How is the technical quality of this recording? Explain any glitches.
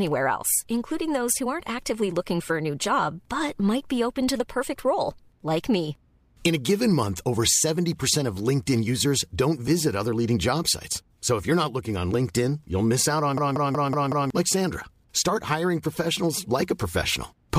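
The recording has one clear glitch. From 13.38 to 14.30 s, a system hang loop repeats a 186 ms fragment five times at 5.4 Hz, a machine-gun stutter consistent with an 8192-sample ring buffer, losing roughly a second of speech.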